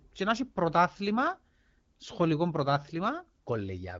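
No technical faults can be heard in the speech, which is carried over the AMR wideband (HD Voice) codec at 12.65 kbit/s, a rate at which this codec keeps speech clear and leaves only light traces of its coding.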